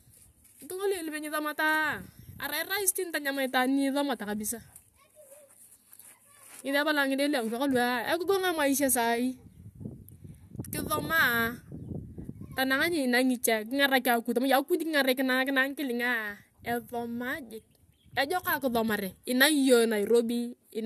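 No technical faults can be heard anywhere in the speech recording, and the signal stays continuous and steady throughout.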